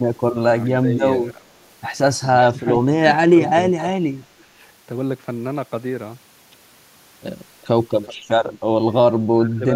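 From 0.66 to 1.53 s the speech dips slightly. It then drops far deeper, by about 15 to 25 dB, at 2.51–2.67 s, 3.33–3.98 s and 4.37–4.58 s, and again from 9.33 s to the end. This is speech suppressed in double talk, likely an echo canceller turning this talker down while the other side was also speaking. At 3.45 s, 7.62 s and 8.06 s, brief, faint scraps of the voice return 377 ms late. This echo leak is likely loudspeaker sound that the far end's canceller failed to remove and sent back.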